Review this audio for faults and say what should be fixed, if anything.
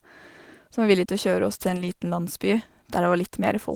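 Lost packets rebuilt from error correction, 1.69 to 1.87 s: the speech carries on without a gap, but that stretch turns rougher and noisier. Each missing packet was replaced by the low-bitrate copy that Opus in-band forward error correction tucks into the following packet, and the decoder played those coarser copies instead. Roughly 100 ms sounds rebuilt, which fits about five separate losses. Reducing network packet loss, for instance with a steadier connection or a larger jitter buffer, would prevent it.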